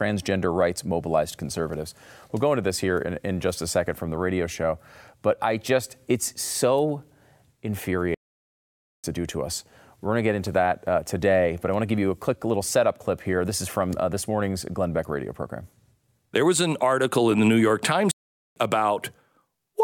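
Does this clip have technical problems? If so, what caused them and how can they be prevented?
Yes: the speech twice drops into silence mid-flow, from 8.14 to 9.04 s before "to do to us", and 18.11 to 18.56 s, a likely playback stall where the player starved or blocked. A larger playback buffer and a player thread that never waits on slow work prevent it.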